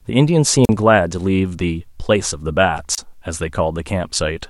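A short burst of hiss falls into near silence at 0.64 to 0.69 s (about 39 ms muted) and again at 2.93 to 2.98 s (about 28 ms), a wireless microphone squelch dropout: the FM radio signal faded and the receiver's squelch cut the output.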